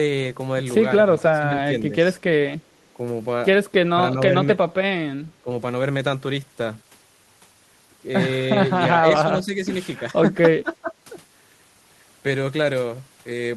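An echo canceller that likely misread moments of both sides talking at once as loudspeaker echo turned the speech down, producing speech suppressed in double talk. The speech dips sharply, by about 15 dB, from 1.16 to 1.53 s, from 5.34 to 5.5 s and from 10.62 to 10.94 s. It sags more gently, by only a few decibels, from 9.03 to 9.74 s. Each dip lasts a fraction of a second before the level returns.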